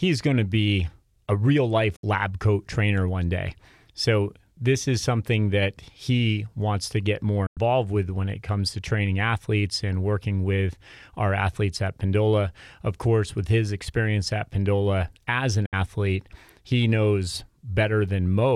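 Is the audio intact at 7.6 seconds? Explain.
No. A digital broadcast dropout runs from 7.46 to 7.58 s, between "wants to get more" and "with when it comes". The receiver lost good frames and muted, fading out over 8 ms into a hole of about 96 ms, which fits three lost frames.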